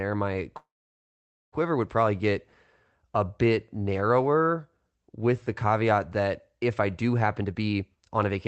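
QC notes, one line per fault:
0.57–1.54 s, call audio freeze: the sound stalls for about 0.95 s before "would probably get", with a brief fading buzz and then about 0.86 s of silence. This is likely packets held up and the jitter buffer running dry. Playback resumes where it stopped, so nothing is lost but the delay grows by that amount.
7.26–8.47 s, jitter buffer speed-up: after "that if I do", the speech runs at about 128% speed with unchanged pitch and sounds hurried. The receiver drains its excess buffered delay by repeatedly cutting pitch-period slices, around 0.4 s in total. The call codec's roughly 8 kHz bandwidth remains audible.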